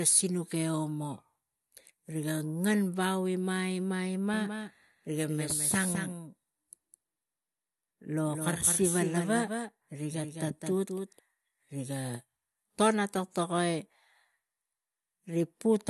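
A doubled audio track runs from 4.34 s to 11.20 s: a second, full-band copy of the speech sits roughly a fifth of a second behind the original and about 5 dB quieter. It likely comes from the signal being captured again through a slower path. The trailing copy carries no decay or room colour, so it sounds like a dry repeat, and it switches on and off abruptly at both boundaries.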